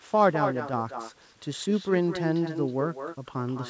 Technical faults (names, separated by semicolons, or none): echo with no canceller; sudden gain jump